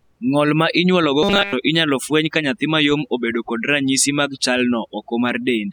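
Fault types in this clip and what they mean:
overdone noise removal: Over-aggressive noise reduction pulls frequency bands down near its noise estimate, leaving a lowered background that breaks up into twinkling specks throughout.
robotic sound from repeated short buffers: From 1.23 to 1.53 s, speech turns into a rigid metallic 200 Hz buzz, likely from nearly all audio being replaced by repeated 5 ms chunks.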